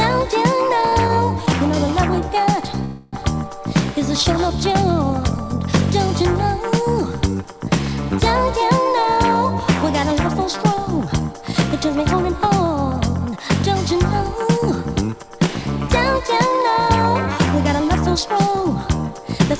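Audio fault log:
0.90–1.49 s, scattered short gaps: a few packets went missing or arrived too late here, roughly three small holes, none longer than about 20 ms, adding up to around 40 ms of patched audio. The receiver covered each hole by stretching the sound that came just before it, so nothing is actually lost, but the sound picks up brief ticks and little smeared hiccups where the filled-in bits join the real signal.
2.84–3.15 s, call audio freeze: the packets were most likely held up in transit, and the jitter buffer ran dry for about 283 ms. The receiver kept the last sound going as a fading buzzy continuation instead of dropping to silence. When the delayed packets finally came in, playback picked up exactly where it had stopped, so the audio is intact but has a stall inserted into it and runs about 283 ms later from here on.
9.16–15.38 s, jitter buffer speed-up: the buffer was holding more audio than it wanted, so the receiver trimmed it back by repeatedly cutting out tiny slices, each a pitch period or a few long, around 300 ms in total. 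Over this stretch the sound plays at about 104 % speed with its pitch unchanged. All of this comes through a G.722 call path at 64 kbps, with nothing above 8 kHz.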